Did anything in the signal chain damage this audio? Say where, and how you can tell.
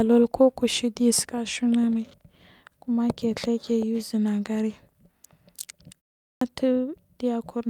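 Yes, at the playback stage. After a 0.31 s pause, the speech at 6.24 s starts abruptly, with about 170 ms of its onset swallowed. That is a clipped start after a pause, as the output device wakes too slowly. Muted pauses would leave onsets whole.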